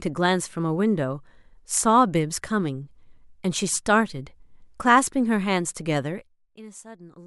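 Zipper noise from 6.05 to 6.42 s in this speech clip: a drop of about 20 dB arrives in unsmoothed steps, roughly a hundred per second, each ticking audibly.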